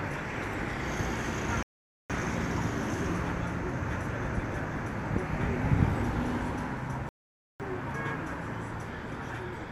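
At 1.63 s the audio drops to silence until 2.10 s, then picks up exactly where it left off. The same happens from 7.09 s to 7.60 s. Both are rebuffering stalls: playback ran ahead of the downloaded data, so the player halted until more arrived. No material is skipped. Each stall simply inserts a gap, about 0.47 s and 0.51 s respectively, so the sound pauses and resumes cleanly.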